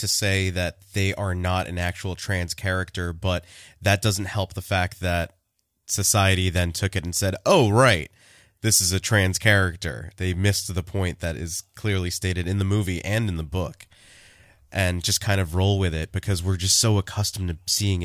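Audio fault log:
No faults: the speech signal is intact throughout, with nothing in the audio path departing from normal behaviour.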